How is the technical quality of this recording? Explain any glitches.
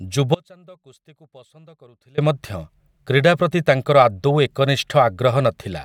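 The recording has one clear fault, an audio dropout to a faint residue, from 0.35 s to 2.18 s. For about 1.83 s the speech abruptly falls to a faint leak roughly 30 dB below normal, likely from a momentary break upstream while the later chain stayed live. The waveform collapses to a thin sliver with sharp edges, and the spectrogram shows a dim band instead of a gradual fade.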